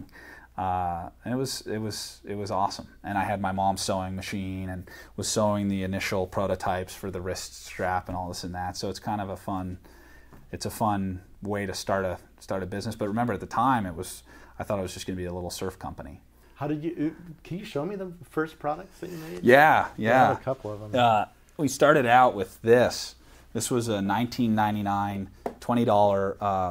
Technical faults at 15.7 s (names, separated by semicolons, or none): none